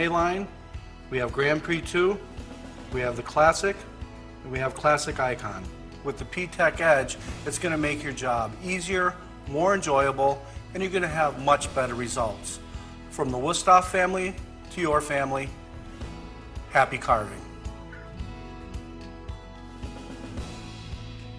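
Nothing technically wrong can be heard anywhere in the audio. No moment stands out that would call for a time or a cause.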